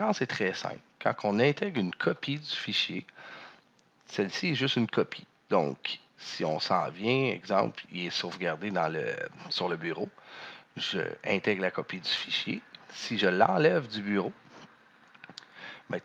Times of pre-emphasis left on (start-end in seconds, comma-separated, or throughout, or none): none